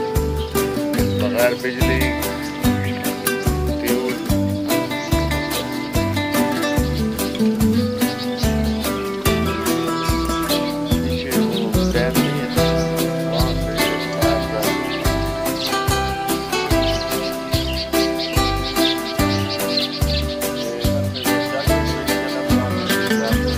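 No technical faults are audible in this audio.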